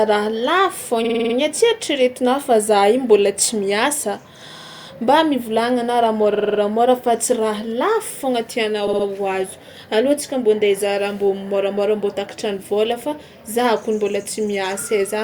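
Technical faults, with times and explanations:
1.04–1.34 s: repeated frames. A 50 ms block plays six extra times, causing a stutter. The waveform shows identical copies, the spectrogram vertical lines every 50 ms, and the clip gains 0.3 s.
4.56–4.86 s: repeated frames. A 60 ms block replays five extra times, giving a rapid stutter. The waveform shows cloned segments, the spectrogram evenly spaced seam lines, and 0.3 s is added.
6.34–6.59 s: repeated frames. A 50 ms stretch sounds five more times, so the audio judders. The waveform shows repeated identical shapes, the spectrogram 50 ms striping, and the clip gains 0.25 s.
8.87–9.05 s: repeated frames. A 60 ms block is replayed three extra times, giving a brief stutter. The waveform shows three cloned copies, the spectrogram vertical seams, and the clip gains 0.18 s.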